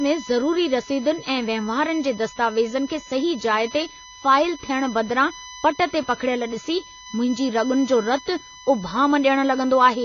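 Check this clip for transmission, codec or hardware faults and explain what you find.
Two faults run through the whole speech clip, start to finish.

A USB whine sits at a steady 1 kHz, strongest right at that frequency and roughly 20 dB under the speech. That's the bus's 1 ms frame rhythm leaking into the audio through power or ground, so you hear a fixed, thin tone that never moves.

There's also plainly audible AAC compression damage, with nothing above 6.9 kHz. The cause is likely AAC-LC at a low bitrate, something like 24 kbps, which cuts the top end and starves the spectrum. The speech comes out dull and smeared, with a warbly, fizzy edge on sibilants.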